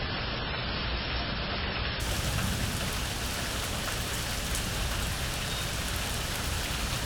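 From 0 to 2.0 s the player is on an adaptive stream starting at a low bitrate, opening on a cheap version before it has measured the connection. Nothing above 5.5 kHz survives, artefacts are stronger, consistent with roughly 16 kbit/s MP3, until the sound jumps cleanly to 128 kbit/s MP3 with no gap.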